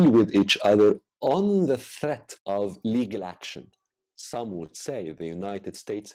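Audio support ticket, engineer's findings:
Microphone overload, 0.00 to 0.92 s, ending just before "on the". Harsh crackle on the loudest syllables; peaks driven about 5 dB past full scale, roughly a tenth of samples clipped. Likely cause: mic input gain set too high, converter flattening the tops. Waveform: squared-off peaks at the rails. Spectrogram: broadband smear above each peak.

Microphone volume stepped down, three abrupt level drops. At 1.02 s, just before "on the", about 6 dB down. At 2.04 s, right after "on the", about 5 dB down. At 3.06 s, about 3 dB down. Voice and background fall together, likely from the call software's auto-gain lowering device input after the overload. Waveform: envelope steps down cleanly at each point. Spectrogram: whole-band darkening at each step.

Repeated stalls (stutter), 4.21 to 4.72 s. Four stalls, 54 ms total held over, longest 26 ms, about 11% of the span; nothing missing. 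Audio drags and hitches. Jitter buffer draining repeatedly from late packet arrival; receiver extends the last sound each time. Waveform: short repeated-looking stretches. Spectrogram: brief horizontally smeared frames.

Scattered short gaps, 5.11 to 5.85 s. About five isolated holes, around 50 ms patched in all, longest about 15 ms, roughly 7% of the span; nothing missing. Brief ticks and small smears. Single lost or late packets, concealed by continuing the previous sound. Spectrogram: thin vertical seams or stretched slivers. Waveform: tiny discontinuities.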